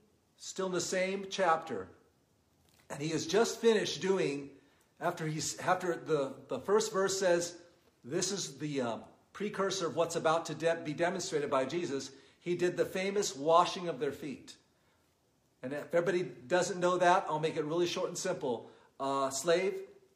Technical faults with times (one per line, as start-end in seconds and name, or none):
none